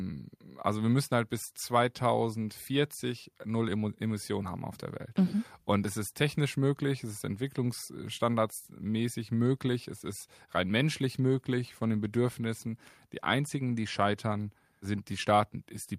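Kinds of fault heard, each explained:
No technical faults can be heard in this recording.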